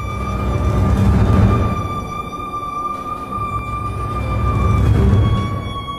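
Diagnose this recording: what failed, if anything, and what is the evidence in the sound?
A doubled audio track appears from 1.33 to 3.59 s: a dry, equally loud copy trails about 200 ms behind, likely from a second capture path.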